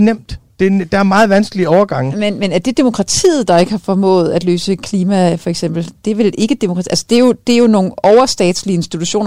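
From 0.63 to 1.83 s the speech runs into hard clipping, pushed roughly 6 dB past what the stage can pass, so the peaks get sliced flat and those squared-off tops spray harmonics way up the spectrum, giving a harsh fuzz on the louder syllables. It comes back, milder, from 6.97 to 7.66 s at about 3 dB over, then again from 8.04 to 8.49 s at about 4 dB, heard as crackly, gritty peaks.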